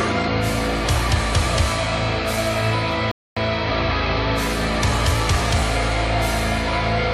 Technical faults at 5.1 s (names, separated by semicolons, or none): none